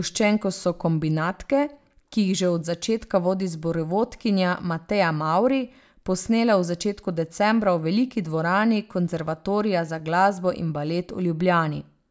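No technical faults can be heard anywhere in the speech.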